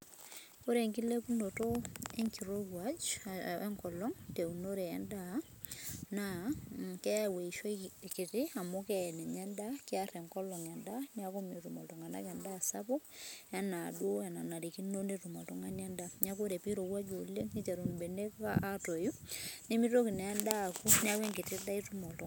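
No technical faults are audible anywhere in this speech.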